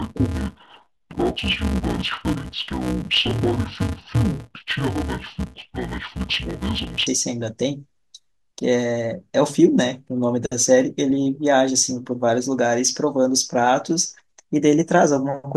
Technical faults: interleaved audio read as planar

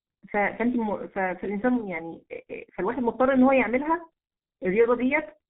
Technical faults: G.723.1 codec

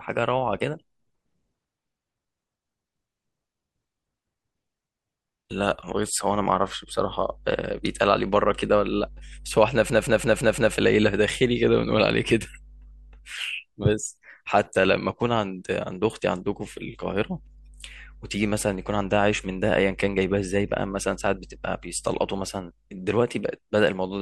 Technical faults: system hang loop

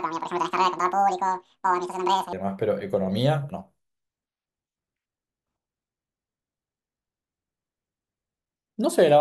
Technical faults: section at the wrong speed

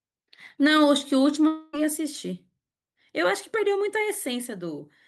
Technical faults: long network dropout

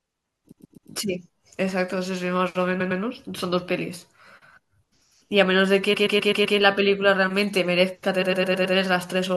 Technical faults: repeated frames

